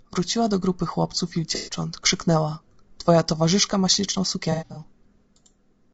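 Speech runs throughout with plainly audible low-delay AAC compression. The voice sounds rough and grainy, with noise between harmonics. This is likely AAC-ELD at a low rate, around 32 kbps. AAC frame loss with concealment occurs at 1.55–1.75 s and 4.52–4.83 s. The decoder fills each gap from earlier spectrum, leaving smeared, noisy patches. The second loss is scattered, with runs up to about a tenth of a second.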